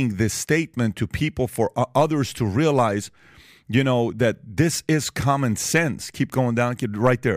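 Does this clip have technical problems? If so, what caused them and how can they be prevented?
No, there are no technical problems in this speech clip. With nothing going wrong, there is no cause to trace and nothing that needs preventing.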